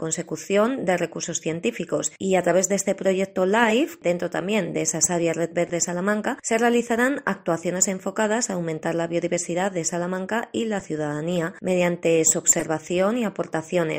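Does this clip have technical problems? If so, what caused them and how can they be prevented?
Yes: corrupt frame decoded, with bursts at 3.62–3.73 s, 5.67–5.70 s, 10.80–10.82 s and 12.58–12.64 s. Damaged compressed frames played anyway put energy at the wrong frequencies, which shows on a spectrogram as short vertical smears. The first and last bursts are louder spikes on the waveform. Adding error checking with concealment would stop damaged frames being played.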